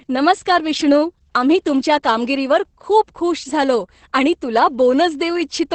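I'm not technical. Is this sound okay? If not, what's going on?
No. The whole clip suffers from Opus voice compression. It was squeezed hard to save space, so the high end is cut off above about 8.5 kHz and the speech sounds muffled and hoarse, even slightly robotic, from start to finish.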